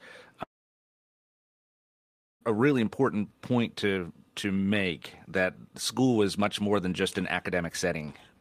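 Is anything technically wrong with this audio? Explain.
Yes. From 0.43 s to 2.43 s the speech cuts out: the last sound smears into a brief fading buzz, then about 1.9 s of near-silence, and it resumes at "a really important point" with roughly 2 s missing. This is likely a long network dropout, with the receiver's concealment filling the gap.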